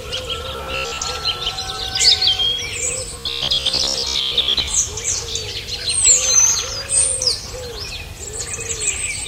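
From 0.53 to 1.03 s, and again from 3.19 to 4.68 s, there's robotic sound from repeated short buffers. Both stretches turn rigid and metallic, locked to a buzz near 67 Hz. The likely cause is new audio arriving too slowly, so the same 15 ms chunk keeps getting replayed to fill the gaps. That period sets the buzz pitch, and since most of the real material is skipped, the sound only loosely tracks what it should be.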